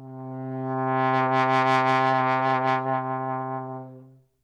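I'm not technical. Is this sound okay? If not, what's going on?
Yes, it sounds fine: nothing stood out as a problem when I listened to it.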